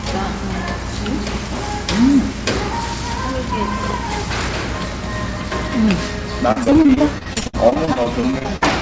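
From 6.52 to 8.63 s, repeated packet loss chops the sound. About a quarter is patched by stretching earlier audio, with holes up to 60 ms, giving a robotic texture.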